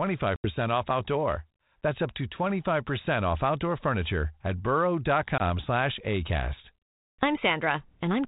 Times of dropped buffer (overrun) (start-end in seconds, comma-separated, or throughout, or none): none